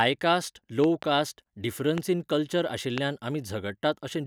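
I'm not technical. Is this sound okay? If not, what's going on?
No. Loud pops interrupt the speech: a double pop between 0.84 and 1.05 s, one at 1.98 to 2.00 s just before "इन कल्चर", and one at 2.98 to 3.00 s right after "इन कल्चर". Each is a sudden electrical jolt, likely from a plug, switch, static or equipment glitch, heard as a sharp thump over the talking, which continues underneath.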